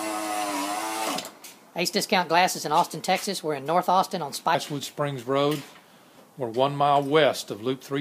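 From 0 to 4.55 s, a section at the wrong speed plays 1.22 times fast, about three semitones high, likely from a clock mismatch. On a spectrogram, harmonics sit higher and drop at 4.55 s.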